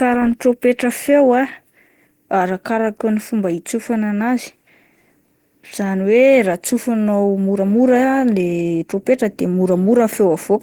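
Throughout, the speech sounds hoarse and grainy, likely Opus compression near 16 kbps. The spectrogram shows noise-filled bands reaching 20.1 kHz rather than gaps.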